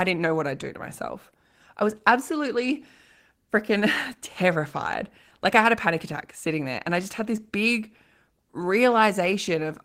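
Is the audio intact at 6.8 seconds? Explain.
Yes, at 6.8 seconds the speech plays through cleanly with no audible dropout, click, distortion or other technical fault.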